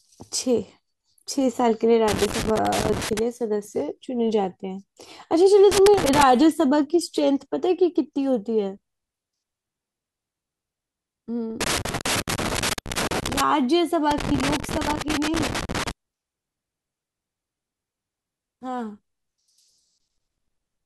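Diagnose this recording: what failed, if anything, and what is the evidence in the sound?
The analogue wiring failed: a worn or dirty contact in a connector is making and breaking as it shifts, producing loose connector crackle over the speech. It comes as irregular bursts of scratching and crackle from 2.08 to 3.19 s, 5.72 to 6.23 s, 11.61 to 13.41 s and 14.11 to 15.91 s. Each interruption chops the signal, and any DC on the line turns every break into a pop, so the bursts sound ragged rather than steady.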